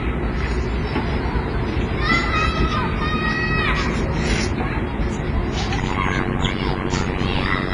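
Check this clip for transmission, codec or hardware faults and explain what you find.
Two faults are present. One affects the whole clip, and one appears near the end.

WMA compression runs throughout. The sound is washy and ringing, with a hiss that swells and fades with the signal. Nothing is heard above 10.5 kHz. This is likely a transform codec like WMA at a low bitrate, around 24 kbps. Long transform blocks smear quantisation noise over tens of milliseconds. Weak spectral lines and the top band are discarded, so the damage is heavy.

Overlap-add ripple starts at 5.78 s and lasts to the end at 7.73 s. The level pumps very deeply, about 60 dB, at roughly a hundred times a second. It sounds like a harsh, robotic buzz or flutter. The audio was split into windowed frames and rejoined with an overlap that does not sum to constant gain. So the level dips once per frame.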